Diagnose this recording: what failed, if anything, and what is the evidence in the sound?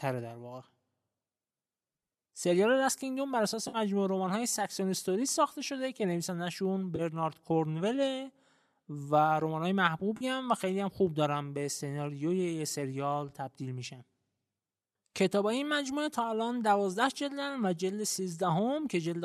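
AAC frame loss with concealment, at the network and codec stage: brief smeared, phasey patches at 3.68–3.77 s, 6.96–7.01 s and 10.17–10.24 s. On a spectrogram each shows as a blurred, noisy vertical strip where harmonics vanish. The decoder, likely low-delay AAC, refilled the lost frames from the last good spectrum.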